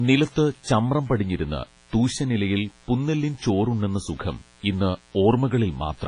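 A speech recording carries two faults for its whole length. The first is mains buzz at 60 Hz, sitting roughly 35 dB below the speech. It is a raspy, steady drone rather than a smooth hum. Sharp switching spikes from something like a dimmer or rectifier, or a missing shield, stack harmonics of 60 Hz far up the spectrum, so the interference has an edge a pure low tone lacks, and it carries straight through the pauses. The second fault is heavy transform-codec damage, most likely WMA compression at a low bitrate, around 24 kbps. The speech sounds washy and ringing, with a hiss that swells and fades with each phrase as quantisation noise smears across long blocks. Nothing remains above about 10.5 kHz. A simple low-pass filter would dull the top but leave no ringing or breathing noise behind, which is what marks this as codec damage.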